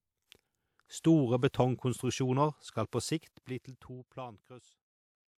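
A transform codec spread its quantisation noise across whole blocks, so noise meant for sharp speech attacks leaked backwards into the quiet just before them. This pre-echo adds a short hiss ahead of the attack, and the onset sounds soft or smeared, from 1.0 to 1.04 s (42 ms) and from 1.49 to 1.54 s (53 ms).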